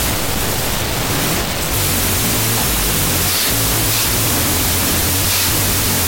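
From start to finish the speech is buried under loud, harsh noise, with the underlying sound running at half speed and pitched roughly an octave low. This is a wrong sample width fault, which fits 32-bit float data being read back as 16-bit integers. Each original sample is split into two values, doubling the sample count and halving the speed. Only the halves holding the float's upper bytes still track the signal, while the rest turn into noise.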